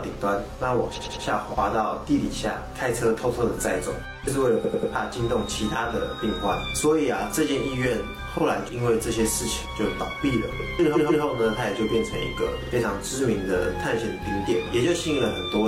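Repeated frames cause stutters at 0.93–1.21 s, 4.60–4.88 s, 10.92–11.20 s and 12.59–12.69 s. A short block of compressed audio plays over again: about 93 ms three extra times in the first two, 139 ms twice in the third, 46 ms twice in the last. These are consistent with one- to three-frame runs of roughly 46 ms each. On a waveform the same shape tiles back-to-back, and a spectrogram shows identical vertical slices with seams between them.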